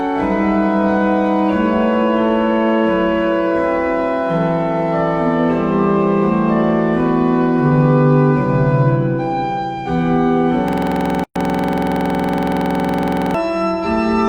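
At 10.68 s the audio locks into a system hang loop that runs until 13.34 s. The driver or host stopped supplying new data while the sound hardware kept replaying the same stretch of its ring buffer. A 46.44 ms fragment repeats exactly, about 55 times, at 21.5 Hz, which fits a 2048-sample buffer. At that length the repetition fuses into a rough, steady buzz at the loop rate.

Inside that loop, from 11.24 s to 11.36 s, a gap at a join of encoded pieces cuts in. Separately encoded segments were concatenated without trimming the encoder's start delay and end-of-frame padding, leaving a 118 ms gap. The drop-out has edges smeared by the codec, and the buzzing repetition picks up again on the far side, continuing from where it broke off.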